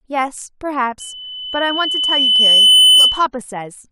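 At 1.00 s a loudspeaker feedback squeal begins and runs until 3.27 s. The microphone is picking up the loudspeaker it drives, and at 3 kHz the gain around that loop exceeds unity, so the tone reinforces itself on each pass. It is heard as a pure whistle that swells over roughly two seconds until it sits about 15 dB above the speech, then stops at 3.27 s.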